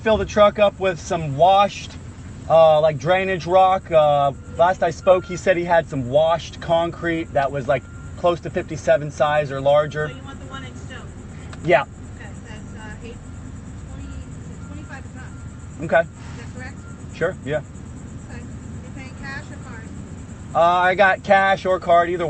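No faults can be heard in the audio, which comes through a WebRTC call path whose Opus coding limits the content to an 8 kHz band, as expected for that kind of link.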